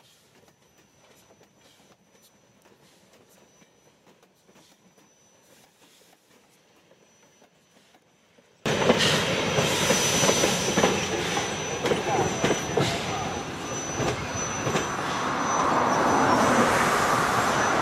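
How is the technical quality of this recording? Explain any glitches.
The first half has a serious fault. From 0.0 to 8.66 s the sound collapses to a faint remnant, about 36 dB down, likely because one channel inverted and cancels its partner.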